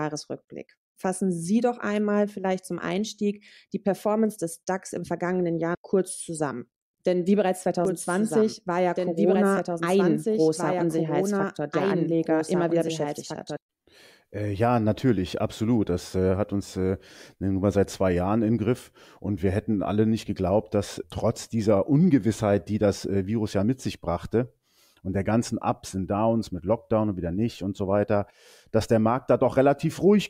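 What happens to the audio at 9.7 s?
At 9.7 s you're inside a doubled audio track that runs from about 7.85 to 13.57 s, right after "wie bereits". A second copy of the speech trails by roughly two seconds, about 5 dB quieter, dry and full-band, cutting in and out abruptly. Likely a slower capture path mixed back in.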